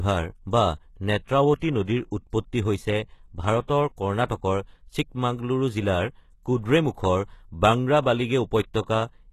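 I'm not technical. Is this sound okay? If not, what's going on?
No. HE-AAC compression runs throughout: the treble stops at 12.3 kHz and sounds gritty and lispy, likely because the top end was rebuilt from copied lower sounds. Pre-echo appears at 1.57 to 1.62 s, just before "নদীৰ উৎপত্তি", and at 4.26 to 4.30 s. A short hiss leaks in before sharp sounds because compression noise spreads backward, softening their start.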